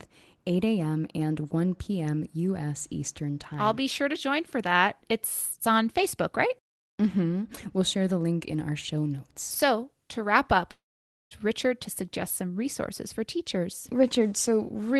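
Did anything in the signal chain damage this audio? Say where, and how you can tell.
Yes, at the network. After "to wrap up", a fading buzz at 10.71 s gives way to silence until 11.34 s. This is likely a long network dropout.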